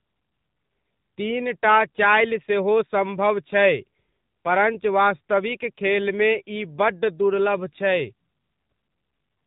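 From start to finish the speech carries AMR narrowband mobile codec damage: a hard ceiling near 3.8 kHz, an empty spectrogram above it, and a buzzy, synthetic tone suggesting a low mode around 7.4 kbps.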